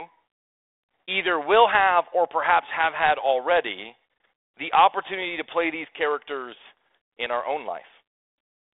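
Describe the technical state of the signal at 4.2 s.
Packet loss on an ADPCM call runs from 4.18 to 4.20 s, between "perhaps have had already" and "the opportunity to play". About 20 ms, roughly one packet, drops to hard-edged silence. The 32 kbit/s G.726 decoder's adaptive predictor and step size then fall out of step, so the audio resumes slightly distorted before settling.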